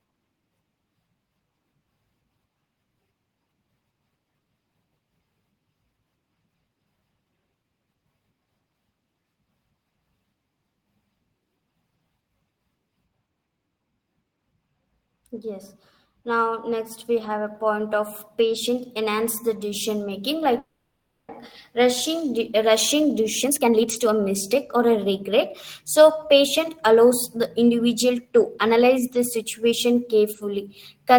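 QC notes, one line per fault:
13.08–17.47 s, de-emphasis applied wrongly: for these four and a half seconds the speech turns dull and muffled, as though a blanket were thrown over it. A treble-cut curve meant to reverse pre-emphasis has been applied to audio that never had any, or applied a second time, so the response slopes smoothly downward, reaching about 8 dB down at 10 kHz relative to 1 kHz. On a spectrogram the upper bands visibly dim for this stretch, with a gradual fade rather than a hard edge; the waveform looks softer, its sharp consonant spikes rounded off.
20.59–21.32 s, call audio freeze: right after "enhance the decision making" the sound stalls and the receiver stretches the last sound into a fading buzz or hiss, ending in about 210 ms of silence, 700 ms in all, before speech resumes exactly where it stopped, with nothing lost but everything now later. The likely cause is delayed packets draining the jitter buffer. 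A spectrogram shows smeared, repeating horizontal bands decaying into a blank strip; the waveform shows a tapering, patterned envelope, then flat line.
22.65–25.31 s and 25.99–28.81 s, jitter buffer speed-up: with audio backed up in the buffer, the receiver trims short pitch-period pieces again and again to shed delay, roughly half a second in the first run and a fifth of a second in the second. Speech plays at 118% then 107% speed at unchanged pitch, sounding hurried, most clearly in the first stretch. On a spectrogram syllables and harmonics appear compressed in time; the waveform shows tighter syllable spacing without pitch shift.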